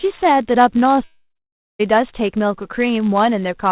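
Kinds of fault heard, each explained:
Block size mismatch (padded), throughout: one stage hands over blocks slightly shorter than the next stage reads, and the shortfall is zero-filled. Each block gets a tiny gap, heard as a steady 99.6 Hz buzz, and the speech runs slow by a factor of 0.996.
Long network dropout, 1.04 to 1.81 s: about 0.76 s of audio never arrives, likely from a network outage. The receiver extends the last sound as a fading buzz or hiss, then about 0.55 s of near-silence follows before speech resumes with the lost section absent.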